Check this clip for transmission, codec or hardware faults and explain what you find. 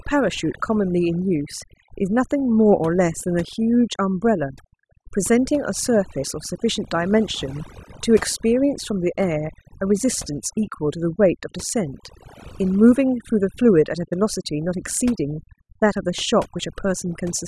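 One processing fault runs through the whole speech clip: overdone noise removal. A noise reducer set too aggressively suppresses frequency bands near its noise estimate, leaving twinkling near-silence between phrases and stripping away quiet parts of the voice.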